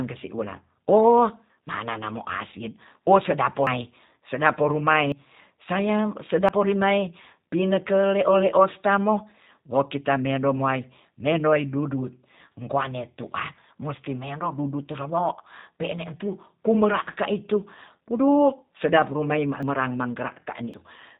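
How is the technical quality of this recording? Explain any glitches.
The technical quality is poor. Two faults are audible.

Throughout, the speech is band-limited and slightly rough, with a synthetic edge. This is G.729 codec damage, consistent with an 8 kbit/s codec. It rebuilds speech from a model and cuts everything above 4 kHz.

At 3.67, 5.12, 6.49, 19.63 and 20.74 seconds, the sound jumps ahead with no gap. Each is likely a dropped buffer (overrun). Roughly 100 to 300 ms is skipped each time, with the longest at 3.67.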